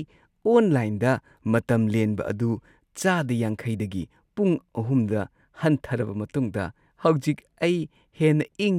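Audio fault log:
Nothing to log here, since no technical faults turn up anywhere in this bit of speech.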